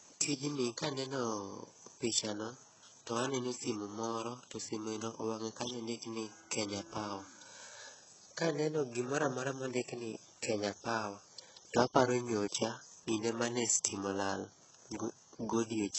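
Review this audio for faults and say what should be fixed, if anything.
Across the whole speech recording the sibilants sound gritty and lispy, the upper range has a synthetic, metallic sheen, and nothing is present above 8 kHz. The damage is heavy throughout. The likely cause is HE-AAC compression at a very low bitrate, which fits something around 8 kbps. Only the lower band is actually coded, and the treble is rebuilt by copying lower bands upward, so the harmonics no longer line up. To prevent this, encode the speech at a much higher bitrate, or use a codec suited to speech that keeps the full band.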